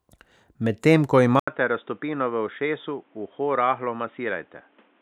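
Input switched to a poorer device at 1.40 s, likely the recording path jumping to a narrower-band microphone or headset profile. After an 80 ms gap the speech turns boxy and dull, with nothing above 3.8 kHz, a drop of about 5 dB, and a new noise floor roughly 35 dB down, lasting to the end.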